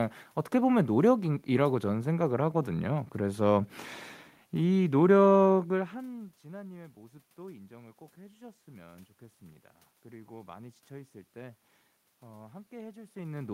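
No technical faults are audible.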